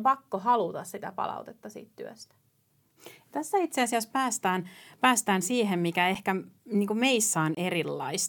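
At 6.15 s, just after "päästään päästään siihen mikä", an 8 ms block of digital silence cuts the speech. It is heard as a tick. From 7.55 to 7.57 s a 23 ms block leaves a short hole, which fits a 1024-sample buffer. In both, the output buffer likely went unfilled and was left as zeros. Unlike a fade-out dropout or concealed packet loss, the level drops to silence and returns abruptly.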